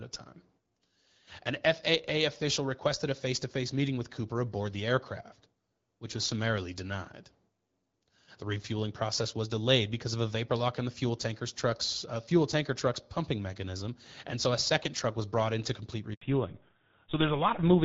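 At 16.13 s the speech drops out for 80 ms, resuming at 16.21 s. This handover gap came from the call switching networks with no speech frames arriving in between. From 16.21 s to the end, the sound loses everything above 4 kHz and turns duller and rougher, where the clear wideband HD Voice sound before it gives way to a fallback to narrowband onto an older GSM codec.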